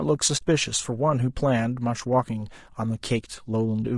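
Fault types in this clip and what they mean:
Low-delay AAC compression: The speech sounds rough and grainy throughout, with noise filling the gaps between pitch harmonics and a thin, artificial top band. This is likely the short-frame low-delay AAC used in video calls, and the plainly audible damage fits a bitrate around 32 kbps.
AAC frame loss with muting: From 0.37 to 0.43 s the audio fades into a brief gap and back out, a hole of about 40 ms. The decoder zeroed the missing spectrum, and the overlapping windows soften the edges, which fits two lost frames.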